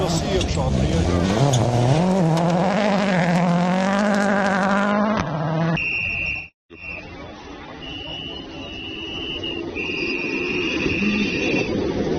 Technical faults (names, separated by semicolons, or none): adaptive stream at a lower bitrate